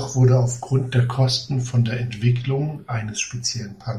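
Speech with channels drifting apart throughout: the two channels were captured on devices with separate clocks that disagree by around 100 ppm, so the inter-channel delay creeps up to roughly a fifth of a millisecond by the end. Summed to mono, comb notches sweep slowly through the spectrum, heard as slow flanging.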